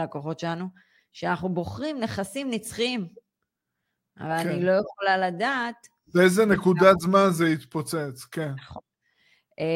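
No audible technical fault turns up anywhere in the recording, with no dropouts, clicks, distortion or timing disturbances to report.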